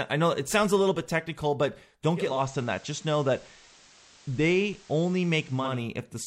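Digital radio blending to analogue runs from 2.10 s to 5.86 s. The receiver lost its digital stream and cross-faded over about 390 ms to the station's FM broadcast, then faded back near the end. While on FM, a steady hiss sits roughly 30 dB under the signal. The level stays matched across both blends.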